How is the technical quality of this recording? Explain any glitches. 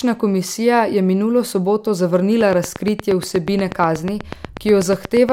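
The recording is marred by one clear fault in its second half. From 2.41 s to 5.30 s a train of clicks runs at a regular 8.33 per second, about thirty near-identical pulses standing well above the speech. They tick steadily through words and pauses alike, most likely from electrical interference or a faulty connection or power supply repeatedly injecting a spike.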